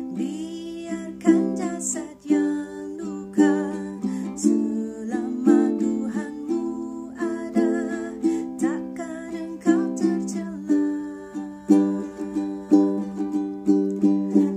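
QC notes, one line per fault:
No faults found. Nothing in the audio calls for a QC note.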